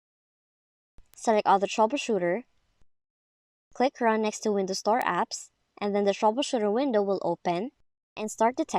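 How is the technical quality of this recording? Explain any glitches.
Two isolated glitches stand out, both bit error spikes. At 1.14 s and again at 5.02 s a single sample jumps by a power of two, reaching about -24 dBFS and then about -12 dBFS, before snapping straight back. Each is one bare, broadband tick unrelated to the surrounding sound. Unlike a dropout or an edit click, nothing is missing and no step or discontinuity remains afterwards.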